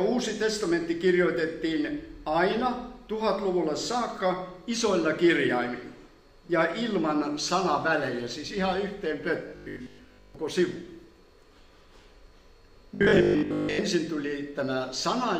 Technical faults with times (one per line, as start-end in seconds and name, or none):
9.48-10.34 robotic sound from repeated short buffers
12.95-13.85 robotic sound from repeated short buffers